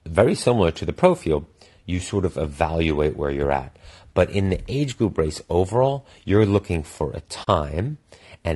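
From the start the speech has a rough, grainy texture, with a hiss sitting between the harmonics and a top end that sounds thin and a bit synthetic. That's plainly audible damage from low-delay AAC compression, likely AAC-ELD at a modest rate, something around 32 kbps. The short frames this codec uses to keep delay down can't separate the voice's harmonics very finely, so at that rate the noise fills the gaps and the high band gets rebuilt rather than kept.

At 7.43 s there's a brief soft gap lasting about 40 ms, to 7.48 s. It's AAC frame loss with muting: the decoder had nothing for that stretch, which fits a couple of lost frames, and zeroed their spectrum. Because the frames overlap, the sound fades out and back in across the hole instead of cutting hard, so you hear a quick dip in the audio.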